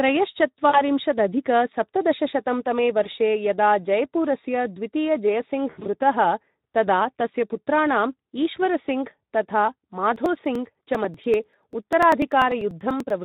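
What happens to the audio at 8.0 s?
At 8.0 s the speech sounds hoarse, grainy and noisy, as it does throughout the clip. This is Speex codec damage. The coloration points to a setting around 11 kbps, where this CELP coder has too few bits to model the excitation signal faithfully.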